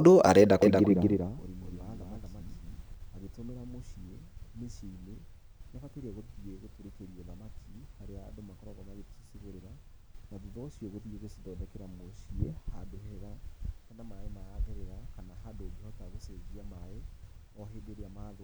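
A doubled audio track runs from 0.62 to 2.94 s: the speech is heard twice, with a second full-band copy trailing the original by roughly a fifth of a second and sitting about 5 dB lower. The copy carries no reverberant tail or room colouring, so it reads as a hard, flat echo rather than a space. It appears and vanishes abruptly at those two points, most likely because the same signal was picked up again through a slower path.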